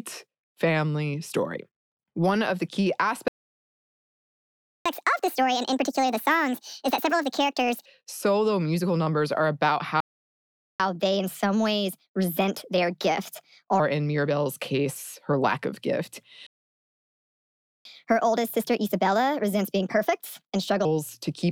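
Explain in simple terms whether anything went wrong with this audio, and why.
Something went wrong three times, and the same pair of faults happens each time.

First comes a playback stall. The speech stops and there is silence. This likely happens because the player runs out of sound to play, or gets held up, and has to wait. The first stall runs from 3.28 to 4.86 s, about 1.6 seconds, right after "one of the key". The second runs from 10.00 to 10.80 s, about 0.8 seconds. The third runs from 16.47 to 17.85 s, about 1.4 seconds.

Each stall is followed by catch-up at higher speed. The player plays what piled up faster to win back the lost time. This raises the pitch too. From 4.86 to 7.86 s the speech runs 1.5 times fast and sounds about seven semitones higher. After "musical numbers are about", from 10.80 to 13.80 s, it runs 1.25 times fast and sounds about four semitones higher. After "her lack of gift", from 17.85 to 20.85 s, it does the same.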